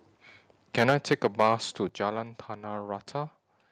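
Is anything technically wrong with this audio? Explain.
Yes, there are two problems. From 0.77 to 1.55 s there's microphone overload. The loudest syllables come out harsh and crackly, with a gritty edge on the peaks. The likely cause is the mic input sitting too hot, driving the signal about 8 dB past what the converter can represent. The waveform tops get sliced flat, affecting only a small share of the samples (around 2 percent).

Then there are two microphone volume step-downs. At 0.9 s, early in that distorted stretch, the whole thing (voice and background together) suddenly drops by about 3 dB. At 1.89 s it drops again, this time by about 6 dB. Neither is a fade; each is an abrupt jump. That's likely the call software's automatic gain control noticing the clipping and cutting the device's input level in single steps.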